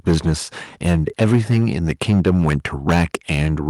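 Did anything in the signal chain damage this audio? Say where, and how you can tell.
Yes. From 0.07 to 0.34 s, and from 0.86 s to the end, the loudest speech peaks sound harsh and crackly. This is likely microphone overload at the converter: input driven about 8 to 9 dB past full scale, squaring off roughly a tenth, then a few percent, of samples.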